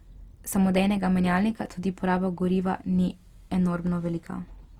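From start to finish, the speech carries plainly audible Opus compression damage, likely from encoding in Opus's music mode, CELT, at a low bitrate near 24 kbps. The encoder keeps each band's energy but runs short of bits, so it fills bands with folded copies of lower ones or with noise. Few spectral holes result. The speech turns rough and grainy instead. Bandwidth stays full, reaching about 20.1 kHz.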